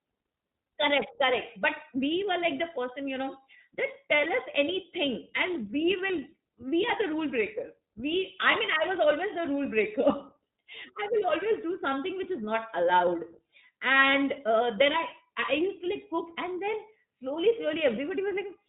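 From start to finish the speech passes through the iLBC codec. Nothing above 4 kHz survives, and the excitation is coded afresh in each frame, so the voice is clear but plainly rough and slightly synthetic. The coarseness fits iLBC's 15.2 kbps mode with 20 ms frames. A wideband codec would keep more high end, and a generic low-bitrate codec tends to smear or gurgle instead of giving this rough, synthetic texture.

Between 8.52 and 8.55 s there are lost iLBC frames, amounting to about 20 ms of missing audio. The decoder fills the gap by repeating the last pitch cycle with added noise, so a short, held, faintly buzzy vowel replaces the real sound. A plain dropout would leave silence or a click. Here the fill is voiced, and because iLBC frames stand alone, the speech recovers almost immediately afterwards with no lingering smear.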